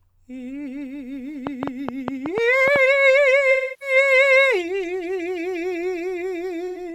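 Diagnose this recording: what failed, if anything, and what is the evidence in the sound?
A train of clicks runs through the music from 1.47 to 2.77 s. Roughly ten pulses arrive at an uneven pace, about 6.2 per second, each about 15 dB above the music. The stage is likely analogue wiring or the interface, picking up interference from nearby equipment.

AAC frame loss with concealment hits the codec stage twice. From 3.51 to 3.96 s, about 0.3 s of audio is lost and concealed, which fits about seven lost frames. A second, 85 ms patch sits at 6.68 s. The decoder rebuilt each gap from the last good spectrum.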